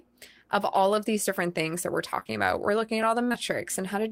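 It's a speech recording with two kinds of network trouble. Right after "different things that we're" there's a run of short concealed packet loss from about 2.19 to 2.31 s. Three consecutive 20 ms chunks went missing, and the decoder papered over each by extending the last sound. You hear it as a slightly smeared, wobbly patch. Another pair of 20 ms gaps follows at about 3.29 to 3.36 s, after "looking at", with the same brief smear. Just before that, at 3.03 s and also right after "looking at", there's a repeated buffer. A tiny 5 ms slice gets played one extra time because fresh audio didn't show up in time, which points to a very small playback buffer. With a block that short, it comes across as a quick click or buzz at the hard join rather than an audible stutter, and essentially nothing is lost.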